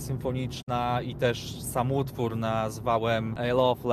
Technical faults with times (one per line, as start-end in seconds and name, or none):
0.61-0.69 digital broadcast dropout